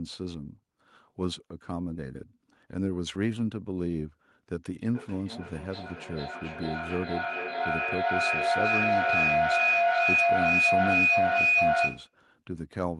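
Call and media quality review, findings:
Feedback howl, 4.92–12.18 s. Tone near 3 kHz builds steadily, peaking about 8 dB above speech, repeats roughly every 0.4 s. Two endpoints sharing one room; mic–speaker loop gain above unity, repeats growing, narrowing to the loop's favoured band. Spectrogram: bright horizontal line near 3 kHz. Waveform: swelling envelope.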